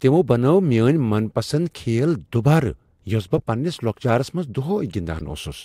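Three short glitches from a corrupt frame decoded: at 0.73 s between "تمو بنٲو" and "من پسند", at 3.37 to 3.41 s just before "پننِس لوكچارس منٛز", and at 5.19 to 5.22 s. Each time, a single damaged frame got played anyway and dumped energy at the wrong frequencies. The middle one is the loudest.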